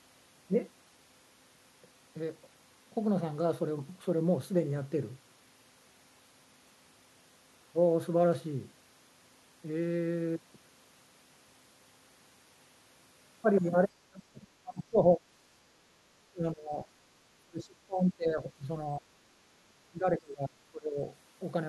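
An echo canceller that likely mistook the talker for loudspeaker echo while the far side was also speaking pulled the speech down, producing speech suppressed in double talk. The level sinks or breaks up at 14.03–14.46 s, 14.63–15.2 s, 16.31–16.87 s, 17.34–18.68 s, 18.97–19.07 s and 19.68–20.99 s. The dips reach roughly 15 to 30 dB, deepest near 17.3–18.7 s, leaving the speech thinned and chopped into fragments.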